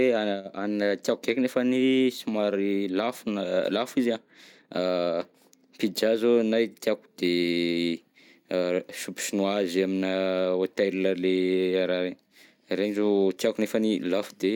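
A speech recording with no technical fault to point to. Nothing in the audio calls for a time, a value or a cause.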